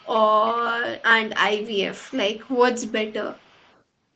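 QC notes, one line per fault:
0.0–0.2, 0.98–1.03, 1.61–1.79, 2.08–2.58, 2.77–3.13 and 3.29–3.81 s: echo leak. A faint copy of the speech trails it by about 0.36 s, in scraps. It sits well below the speech, quietest near 1.0 s, 1.7 s and 3.3–3.8 s. Likely a far-end loudspeaker whose echo canceller let some sound back.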